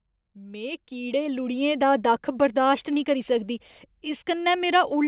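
From 0.2 s to 2.12 s the automatic gain rising comes from a control that judged the input too quiet and slowly raised its gain by about 9 dB. Speech and background swell together over those two seconds, on a call path that carries nothing above 4 kHz.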